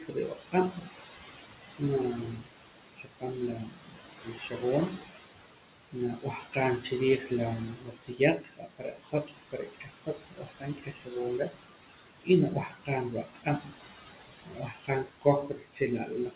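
Noise suppressor artifacts run through the whole clip. The room noise, about 10 dB under the speech, is pulled down by about 16 dB between phrases and returns beneath them. This frame-by-frame pumping is what separates it from plain steady background.

Speech cut by the noise suppressor occurs at 0.00–1.05, 1.38–1.82, 2.16–2.57, 2.93–5.13, 5.92–7.31, 7.74–12.29, 12.63–14.03 and 14.46 s to the end. Quiet consonants and word endings dip by about 14 to 18 dB and sound swallowed. This is unlike the even dullness from the call path's 4 kHz ceiling.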